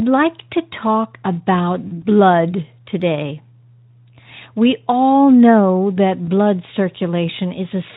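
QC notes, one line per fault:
1.87–2.03 s, VoIP packet loss concealed by the speech codec: about 40 ms of packets dropped, so the decoder extrapolated from its last pitch and filter into a fading buzzy tone or coloured noise just before "blood today".
6.25–6.28 s, VoIP packet loss concealed by the speech codec: a 20 ms gap, consistent with a single lost frame, right after "all know", briefly extrapolated into a fading buzzy tone or coloured noise.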